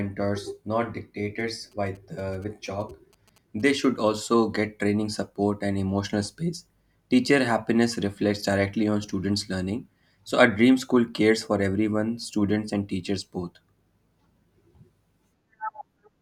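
GSM signalling bursts run from 1.39 s to 4.09 s in this speech recording, ending just before "get training support and". A nearby 2G phone was exchanging brief signalling bursts with the network, and the audio circuitry rectified that radio energy into sound. The result is a galloping dit-dit-dit of short buzzes at about 217 Hz, the burst repetition rate, sitting roughly 30 dB below the speech.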